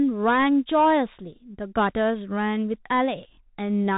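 Throughout, the Bluetooth CVSD headset codec cuts everything above 3.8 kHz, and its lagging one-bit step leaves scratchy s sounds over granular hiss, unlike a clean low-pass.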